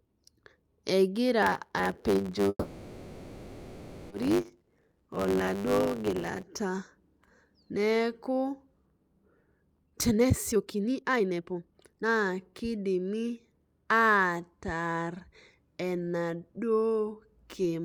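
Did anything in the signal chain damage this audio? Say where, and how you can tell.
Yes. From 1.42 to 6.43 s the speech buzzes at 100 Hz and runs about 1.09 times fast. This is a block size mismatch (truncated) in the driver or buffer stage, which drops each block's tail.

From 2.49 to 4.12 s the sound stalls, the last sound hangs on and fades, then resumes where it stopped. This is a call audio freeze, likely from delayed network packets emptying the jitter buffer, and it adds 1.61 s of delay.

From 9.83 to 13.31 s the speech sounds hurried, at about 146% speed with pitch unchanged. This is a jitter buffer speed-up: the receiver trimmed roughly one and a half seconds of pitch periods to cut the backlog.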